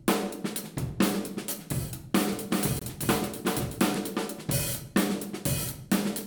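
From 2.33 s to 3.95 s the everyday sounds are shadowed by a second copy of themselves, trailing roughly 400 ms behind and about 5 dB quieter. This doubled audio track carries the full bandwidth with no smearing, decay or room colour, and it switches on and off abruptly at those edges. The likely cause is the same signal arriving twice, once through a slower path, and being mixed back in out of step.

Inside that stretch, from 2.79 s to 2.82 s, the audio drops out entirely for about 23 ms, a short hole as it cuts away and returns. This is a block of digital silence: the samples were replaced by zeros with no fade. A gap of that length fits a 1024-sample buffer that went unfilled in time, so the output held nothing for one block.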